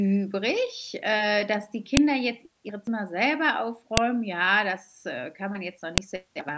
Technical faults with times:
1.97 file header played as audio
3.97 file header played as audio
5.98 file header played as audio

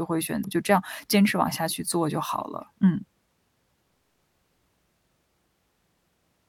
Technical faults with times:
0.44 damaged data in a compressed stream

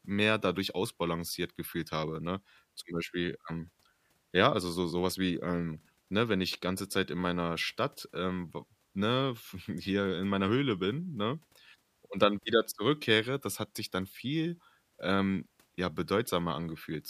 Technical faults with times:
none

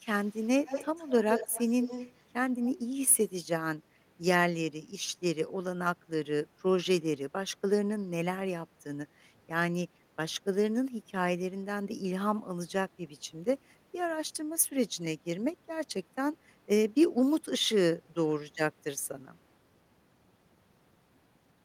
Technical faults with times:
0.23-2.23 echo leak
3.10-3.16 echo leak

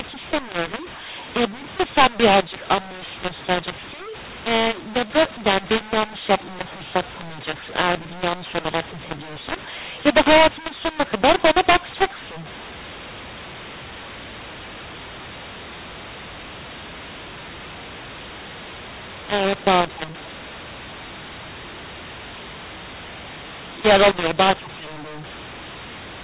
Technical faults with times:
0.00-26.23 mu-law and A-law mixed up

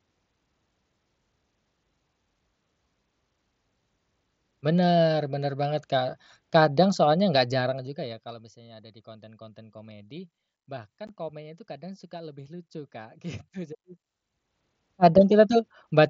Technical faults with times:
11.07 unconcealed Bluetooth headset packet loss

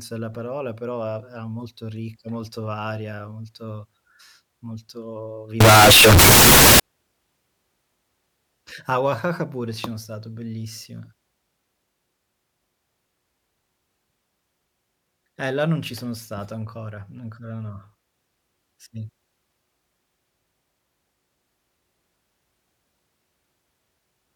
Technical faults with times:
5.60-6.80 float read as integer

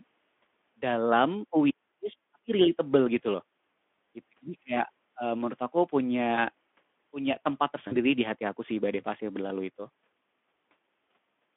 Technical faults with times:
6.35-6.39 VoIP packet loss concealed by the speech codec
7.88-7.97 VoIP packet loss concealed by the speech codec

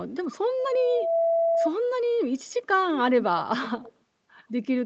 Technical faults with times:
0.59-1.71 loudspeaker feedback squeal

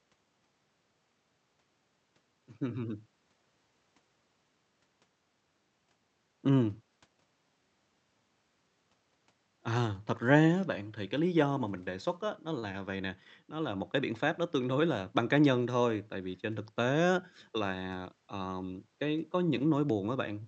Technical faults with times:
none

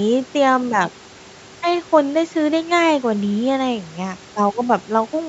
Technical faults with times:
none

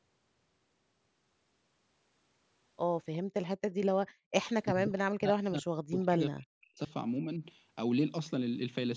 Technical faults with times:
3.23-3.34 background gated by the echo canceller
4.11-4.32 background gated by the echo canceller
4.73-6.91 speech suppressed in double talk

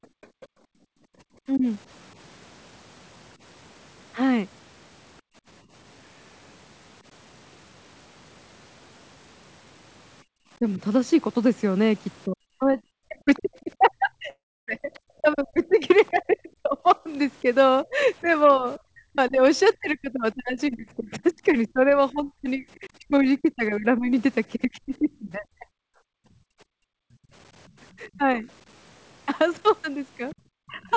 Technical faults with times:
0.00-1.19 background gated by the echo canceller
0.22-0.46 other side's voice leaking through
1.47-1.66 speech suppressed in double talk
5.21-5.35 background gated by the echo canceller
10.24-10.31 background gated by the echo canceller
10.59-30.96 speech suppressed in double talk
13.35-18.79 other side's voice leaking through
14.30-14.69 long network dropout
23.42-23.46 other side's voice leaking through
26.12-27.32 background gated by the echo canceller
27.69-30.96 other side's voice leaking through

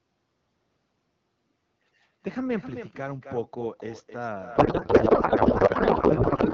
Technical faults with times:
0.00-6.54 echo with no canceller
4.55-6.54 codec payload misread

